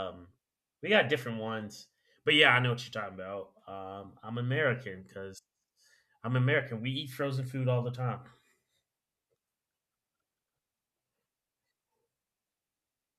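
Nothing stood out as a technical fault anywhere in this speech recording on listening.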